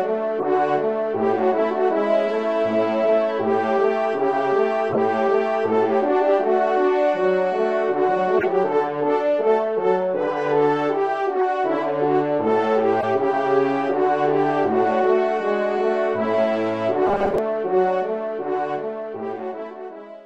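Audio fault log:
0.40–0.45 s, 4.92–4.98 s, 8.38–8.46 s, 11.36–11.43 s, 13.00–13.04 s: corrupt frame decoded. Short chirps and bursts of noise, each spanning two or three damaged frames. Misread data puts energy at wrong frequencies. The loudest is at 8.4 s.
17.07–17.38 s: robotic sound from repeated short buffers. A rigid 200 Hz metallic buzz. A 5 ms stretch is likely being looped while most of the real audio is skipped.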